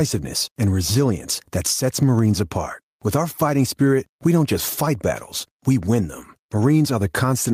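Gain pumping runs through the whole recording: the gain drops by about 10 dB under each loud syllable. It's likely from mic gain cranked too high with a fast limiter clamping down, leaving the speech squashed.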